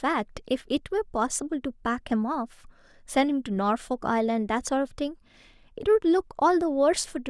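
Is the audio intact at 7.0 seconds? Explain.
Yes, at 7.0 seconds the audio is intact, with no fault audible at that moment.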